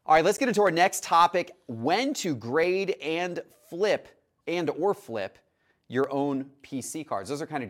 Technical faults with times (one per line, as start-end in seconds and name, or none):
0.35-0.40 corrupt frame decoded
0.67 dropped samples
2.63 dropped samples
6.04 dropped samples
6.94 dropped samples